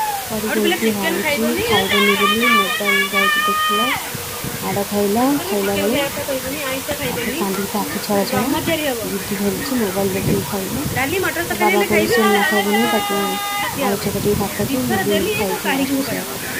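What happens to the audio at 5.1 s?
At 5.1 s you're hearing the low bit depth with dither that runs through the whole clip, so nothing special happens at that moment; it's the same as everywhere else. The audio sounds like it's been squeezed down to about 5 bits, with dither added before rounding, so the rounding error turns into a steady white hiss instead of grit or distortion. That hiss sits only around 10 dB under the signal, so it's loud and constant.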